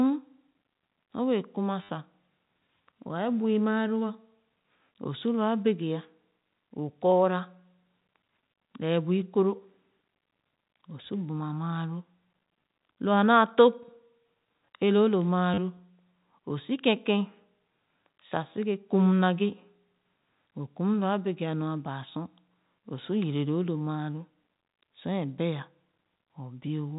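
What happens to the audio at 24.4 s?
Nothing goes wrong at 24.4 s; the speech there carries on intact, with only the usual 4 kHz ceiling of G.711 telephone coding.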